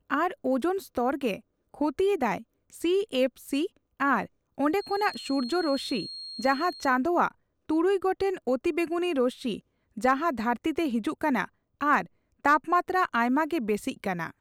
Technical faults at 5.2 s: feedback whistle

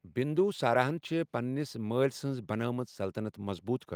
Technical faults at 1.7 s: none

